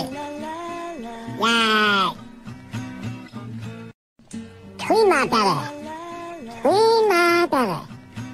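At 6.28 s, lasting to 6.33 s, there is a corrupt frame decoded: a short stretch of compressed data arrived with flipped bits, and the decoder reconstructed it anyway instead of concealing it. Misread gain values and spectral codes place energy at frequencies that don't belong there for roughly two frames, about 46 ms. It comes through as a brief chirp-like blip of spurious noise, peaking at around -30 dBFS, sitting on top of the surrounding audio.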